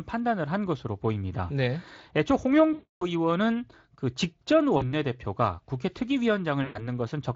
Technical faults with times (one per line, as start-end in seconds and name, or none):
2.73-3.06 VoIP packet loss concealed by the speech codec
4.77-4.94 VoIP packet loss concealed by the speech codec
6.63-6.89 VoIP packet loss concealed by the speech codec